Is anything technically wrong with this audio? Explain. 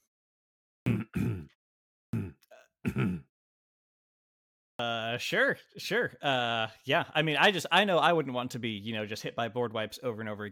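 Yes. There is a clipped start after a pause at 0.73 s, 2.0 s and 4.66 s, each following silence of 0.5 to 1.4 s. The output device sleeps during silence and needs about 0.13 s to wake, so speech onsets lose their first sounds. On a waveform, energy jumps abruptly from flat silence to full level, with no gradual rise.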